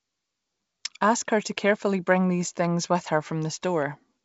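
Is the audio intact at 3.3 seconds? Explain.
Yes, the audio is intact at 3.3 seconds, with the speech carried cleanly through G.722 wideband telephone coding at 64 kbit/s and no break or added fault at that moment.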